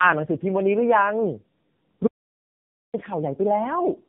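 Tandem speech coding runs through the whole clip. Two low-rate speech codecs worked in a row. The second coded the first one's damaged output again. The sound fits G.729A followed by AMR-NB. Nothing reaches above 3.5 kHz. The speech sounds rough, muffled and warbly.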